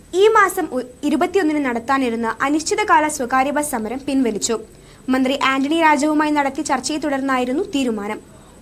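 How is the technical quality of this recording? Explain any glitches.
Nothing stood out on listening, and there were no glitches to explain.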